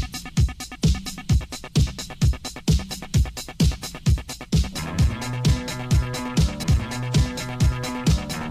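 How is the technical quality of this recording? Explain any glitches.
There's one glitch, at about 6.62 s: a stream segment skipped. You hear a small blip and the sound jumps forward, with a chunk of the programme just gone. Most likely a segment failed to load and the player moved straight on to the next one.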